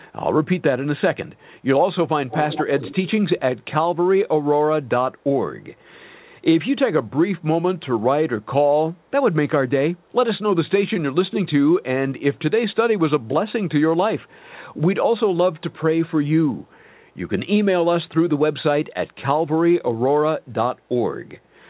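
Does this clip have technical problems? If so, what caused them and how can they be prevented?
Yes. Echo leak appears at 2.29–3.64 s, 5.80–5.84 s, 8.42–9.07 s, 10.05–10.13 s, 12.17–13.52 s, 14.21–14.50 s and 15.57–16.83 s. Each time, a copy of the speech trails the original by 138 ms. In the first stretch it is only somewhat quieter than the speech; later it is faint, near the edge of hearing. The likely cause is a participant on loudspeaker whose echo canceller failed to strip its microphone's pickup of the incoming audio, so that residue travelled back down the call. To prevent it, that participant should use a headset, or lower the speaker volume and use a device with a properly tuned echo canceller.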